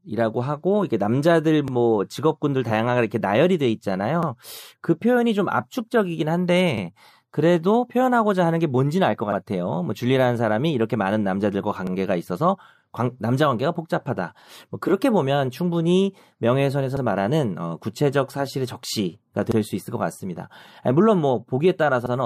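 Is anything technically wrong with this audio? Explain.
Yes. Overlapping chunks, nine joins from 1.68 to 22.06 s, about every 2.55 s: each 2.5 s chunk starts about 48 ms early, replaying that slice as a regular stutter in the speech.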